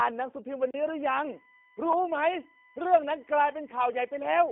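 From start to finish the speech sounds thin, slightly rough and synthetic, with nothing above 3.6 kHz and little below 250 Hz. That is G.729 codec damage: the voice is rebuilt from a vocal tract filter, a pitch predictor and a few pulses per frame, which fits 8 kbit/s G.729A.

At 0.71 s the sound drops abruptly into a short hole lasting about 34 ms, ending at 0.74 s. This is a block of digital silence: a run of samples was replaced by zeros, likely because the output buffer was not filled in time.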